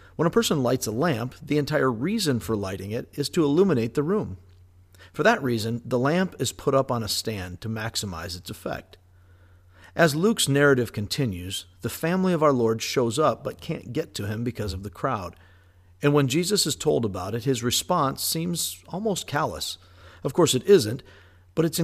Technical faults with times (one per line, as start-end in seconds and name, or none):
none